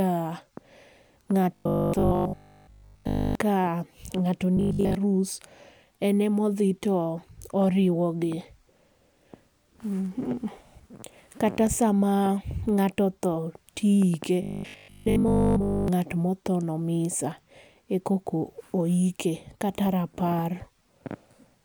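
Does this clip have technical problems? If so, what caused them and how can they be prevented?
Yes. Robotic sound from repeated short buffers occurs at 1.55–3.35 s, 4.57–4.95 s and 14.42–15.88 s. The speech collapses into a rigid, metallic buzz pitched at 50 Hz, which fits a 20 ms chunk being looped. The likely cause is audio arriving too slowly, so playback keeps replaying its last buffer while new speech is skipped. The first and third stretches are buzz throughout, and the middle one mostly. A larger jitter buffer and steadier network or processing throughput would prevent it.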